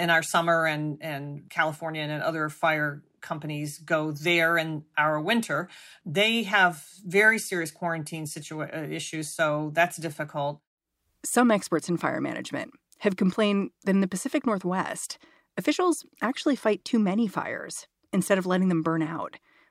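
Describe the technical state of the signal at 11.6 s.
At 11.6 s the speech signal is intact, with no audible fault at that moment.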